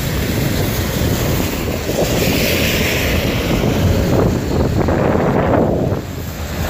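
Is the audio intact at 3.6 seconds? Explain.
Yes, the audio at 3.6 seconds is intact, with no dropout, click, distortion or other fault at that moment.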